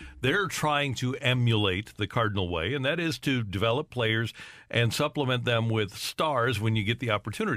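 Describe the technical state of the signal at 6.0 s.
At 6.0 s the speech signal is intact, with no audible dropout, distortion, glitch or other technical fault.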